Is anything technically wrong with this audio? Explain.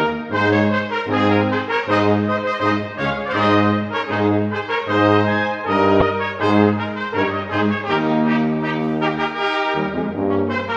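Yes. From about 5.99 to 6.02 s there is damaged data in a compressed stream. For roughly 34 ms, part of the encoded bitstream is corrupt: bytes were lost, zeroed, overwritten or mixed with unrelated data. The decoder either misinterprets those frames or discards them, drops frame sync, and scans forward for the next valid header before normal decoding resumes. The result is a brief, unnatural chirp or blip that breaks abruptly into the audio at that point.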